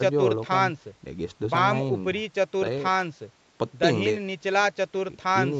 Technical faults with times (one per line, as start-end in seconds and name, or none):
none